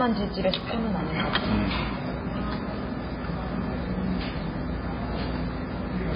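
The whole clip carries heavy damage that's most likely MP3 compression: the remaining detail swirls and goes watery as weak frequency lines flicker between frames. That starved, smeary sound points to a very low bitrate, somewhere around 16 kbps.

At 0.61 s there's one sharp click, probably dropped samples. A couple of samples go missing, a tiny fraction of a millisecond, so the waveform jumps straight to a later value. Nothing audible is lost, but the jump itself snaps.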